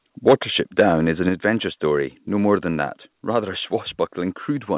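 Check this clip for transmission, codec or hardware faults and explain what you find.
Two hardware-side faults stand out: the microphone overloads twice, and its level is pulled down twice in steps. The audio is band-limited, with nothing above 4 kHz, which points to a G.711-style telephone codec at 64 kbps.

Microphone overload occurs from 0.27 to 0.34 s, and again from 0.79 to 0.89 s, just before "is an adventure story". Peaks push about 5 dB past the converter's limit. The likely cause is input gain set too high, so the converter flattens the waveform tops. The first burst clips a fair share of samples. The second clips only a few. Both add a harsh, crackly edge to the loudest moments.

The microphone volume is stepped down at 0.29 s, by about 3 dB, and at 1.29 s, by about 4 dB, between "is an" and "adventure story". Each is a sudden drop in the whole signal, background included. This is likely an automatic gain control reacting to the clipping and cutting the device input in one move. 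The first step lands inside the first overload burst. You hear an abrupt dip rather than a smooth fade.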